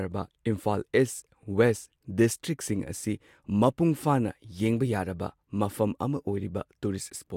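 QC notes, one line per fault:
No faults heard anywhere in this speech clip.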